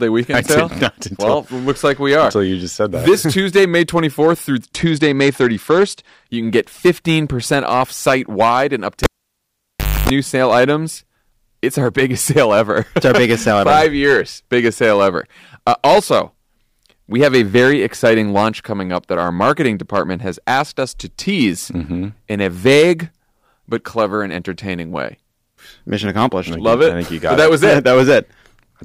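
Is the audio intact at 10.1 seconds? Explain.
No. At 10.1 s the cable pulled and plugged in event ends: from 9.04 s the signal drops out for about 1 s. Within that gap a 0.27 s burst of 50 Hz mains buzz occurs while only the tip makes contact, and a pop marks the reconnection. Hard clipping also runs through the whole clip: peaks driven about 13 dB past the limit are cut flat on roughly 2 percent of samples, adding harsh upper harmonics.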